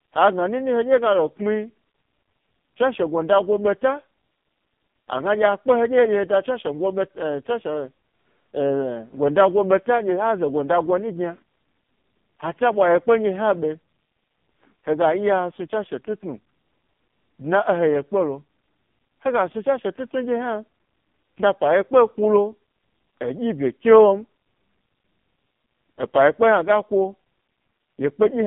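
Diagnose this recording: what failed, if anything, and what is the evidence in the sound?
The codec stage is at fault: AMR narrowband mobile codec damage runs through the whole speech recording. A spectrogram shows a hard ceiling at 3.5 kHz and an empty floor below about 150 Hz. The heavy buzzy, synthetic timbre comes from sparse pulses driving a vocal-tract model, which points to a low bitrate mode, near 5 kbps.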